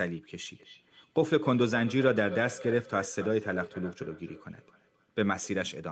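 Speech here, and from 0.53 s to 5.55 s there's a feedback echo between two devices: each bit of speech comes back roughly every third of a second, thinner and ringier each pass, peaking at about 15 dB below the direct sound. What's happening is two devices in the same room share the call, one plays out the other's mic feed, that mic hears it again, and neither echo canceller touches sound it didn't play itself. Everything tops out around 8 kHz, which is just the call path's bandwidth.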